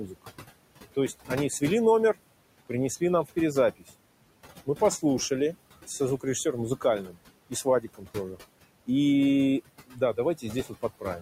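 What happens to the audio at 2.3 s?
Noise suppressor artifacts run throughout, including at 2.3 s. Steady-noise bands drop by about 20 dB between words, so the room noise pumps. This shows as a patchy, flickering spectrogram floor.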